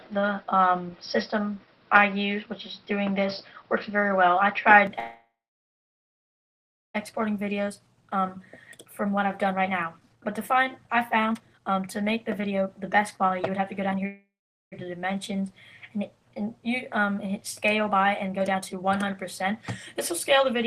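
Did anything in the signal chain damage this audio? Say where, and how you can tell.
Yes. From 0.0 to 4.87 s the sound is dull and boxy, with nothing above 5.6 kHz, a level about 5 dB different and a faint new noise floor. It then clears with no gap. An input switched to a poorer device at the driver stage is the likely cause. A codec low-pass would not also change level and noise.

A call audio freeze, likely from network delay draining the jitter buffer, occurs at 4.99 to 6.96 s and at 14.07 to 14.74 s. Each time the last sound lingers and fades, then silence (about 1.6 s and 0.4 s), and the audio resumes where it stopped. Unlike a dropout, nothing is missing.

Jitter buffer speed-up occurs four times, first right after the first freeze. The audio runs faster at unchanged pitch at 7.12 to 8.37 s (108%), 8.78 to 14.06 s (124%, about a second and a half removed), 17.85 to 19.53 s (122%) and 19.95 to 20.47 s (110%). 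The receiver cut whole pitch periods to shed delay. A sample-rate error would shift pitch too.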